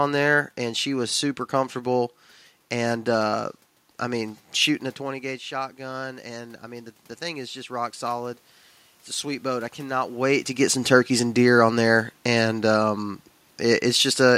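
From 4.98 s to 8.44 s the automatic gain rising is audible. Just before it, at around four and a half seconds, the talker moves away and the input falls by about 14 dB. The gain control then lifts its gain by about 6 dB over roughly three and a half seconds, so the speech and the room noise swell together. On a waveform the envelope climbs steadily across that span, and a spectrogram shows the noise floor brightening in step with the speech.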